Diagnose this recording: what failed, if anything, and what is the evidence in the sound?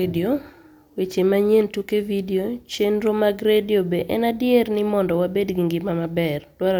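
Nothing failed; no stage shows any audible fault.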